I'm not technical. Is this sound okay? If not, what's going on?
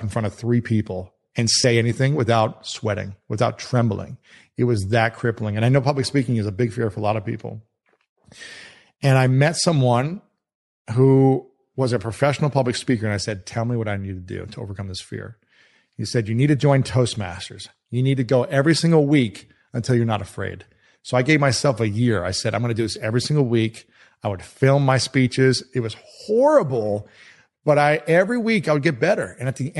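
No, it isn't fully clean. All the way through, the speech has a plainly audible breathy, grainy edge. That is likely Bluetooth LC3 compression, which squeezes the audio to fit a wireless link and replaces some fine high-pitched detail with a noise-like fill.

There are also two tiny glitches where lost LE Audio frames briefly blur the sound into a short noisy smear: one from 1.62 to 1.64 seconds, and a shorter one at 17.15 seconds. Small chunks of the wireless signal never arrived, so the receiver patched the gaps by reusing the previous bit of sound in scrambled form.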